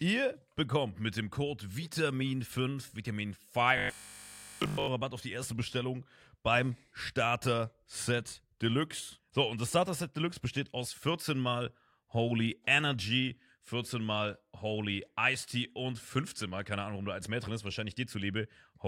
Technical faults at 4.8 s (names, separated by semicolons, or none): robotic sound from repeated short buffers